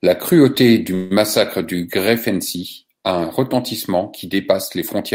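A speech clip with one call audio freeze from 0.94 to 1.13 s: the last sound is stretched into a fading buzz for about 162 ms, then speech resumes with nothing lost but running 162 ms late. Likely cause: delayed packets draining the jitter buffer.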